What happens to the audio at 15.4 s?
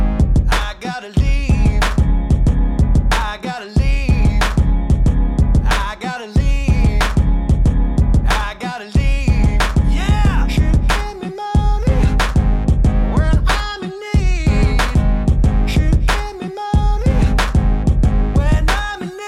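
Nothing goes wrong at 15.4 s; the audio runs through that moment intact, with no dropout, click or other fault.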